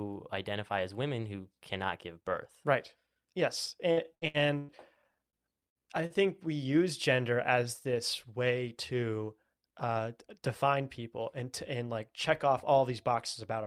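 Choppy, robotic speech between 3.91 and 4.71 s is repeated packet loss (robotic sound). Four gaps open in quick succession, the longest about 105 ms. Each is patched by extending the sound just before it, so roughly 36% of that stretch is concealment rather than real audio, about 291 ms of filler in all, and around 240 ms of the original speech never arrives. Twice the speech hangs for an instant with a slight buzzy hold: from 5.30 to 5.36 s and from 6.06 to 6.13 s. These are short stalls from a late packet. Each time the jitter buffer ran dry, the receiver stretched the last sound by 28 ms and then 35 ms until the packet turned up, and resumed exactly where it left off, so nothing is lost but the delay grows by those amounts. Between those two stalls, from 5.69 to 5.77 s, a brief buzz or fading hiss is followed by a jump forward. That is a burst of packet loss: consecutive packets failed to arrive in time, the last sound was continued and faded for about 50 ms, and about 60 ms of speech is skipped when playback picks up again. 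From 9.33 to 9.99 s the speech sounds hurried while its pitch stays put. This is a jitter buffer speed-up: after late packets arrived together, the receiver trimmed tiny pitch-period slices to drain the excess, playing at about 110% speed and dropping around 70 ms in total.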